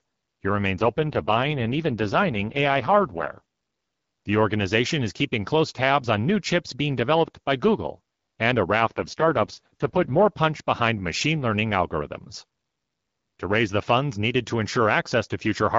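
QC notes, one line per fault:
0.76–3.41 s and 8.79–10.28 s, AMR rate drop: the speech turns rough, raspy and synthetic with no gap and no loss of bandwidth, then clears. The wideband codec has stepped down to a lower mode, which fits a drop from 12.65 to 6.6 kbit/s, and then recovered.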